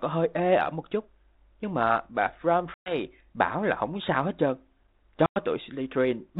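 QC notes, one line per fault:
2.74 s and 5.26 s, packet loss on an ADPCM call: about 120 ms then 100 ms dropped to silence; the ADPCM predictor desyncs, so audio returning at "bảo là không sao" is slightly distorted before settling.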